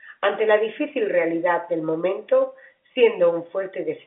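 The clip is speech heard through G.711 telephone coding, and nothing is technically wrong with it.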